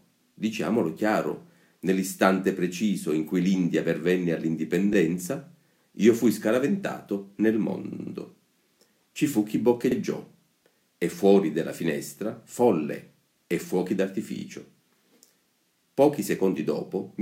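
The audio stutters in four places from repeated frames, where a short run of compressed frames is decoded again: a 14.5 ms block replays once at 4.93 s, a 62.4 ms block plays three extra times from 7.92 to 8.13 s, a 39.2 ms block repeats once at 9.90 to 9.95 s, and a 16 ms block plays twice more at 14.37 to 14.43 s. Each replay lengthens the audio rather than removing anything, which sets this apart from a dropout.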